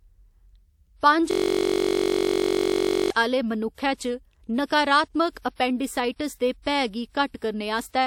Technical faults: system hang loop

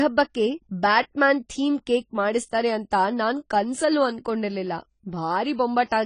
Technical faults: AAC compression

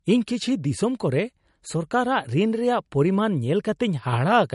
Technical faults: low-bitrate audio saved at a high bitrate

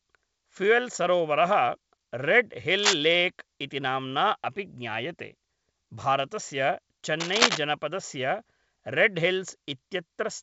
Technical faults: cable scratch noise

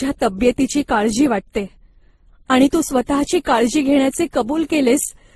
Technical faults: transcoding between lossy codecs

